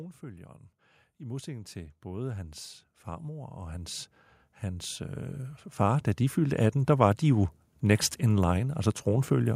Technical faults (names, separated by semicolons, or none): automatic gain rising